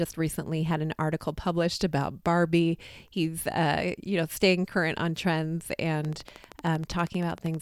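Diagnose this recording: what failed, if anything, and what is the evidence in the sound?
A steady ticking rides over the speech from 6.05 s to 7.55 s, a train of clicks at a regular 12.7 per second, around twenty in all, each poking out above the speech. The evenly spaced, same-shaped pulses most likely come from interference coupling into the analogue wiring.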